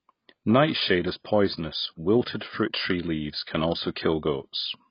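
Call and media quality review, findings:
Throughout: speech dull and smeared, nothing above 5.1 kHz, warbling sibilants. Likely AAC compression at very low bitrate, with coarse spectral quantisation and a lowered cut-off.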